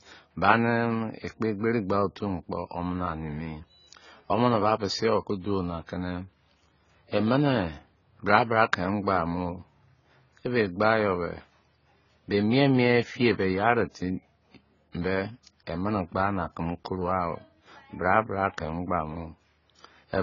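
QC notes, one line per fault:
Throughout, AAC compression: nothing is heard above 7 kHz, and the speech sounds dull and smeared, with a warbling, fizzy edge on sibilants. This is likely heavy AAC-LC coding, consistent with about 16 kbps, discarding the top band and coarsely quantising the rest.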